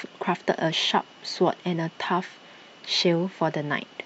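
No technical faults can be heard anywhere in the speech.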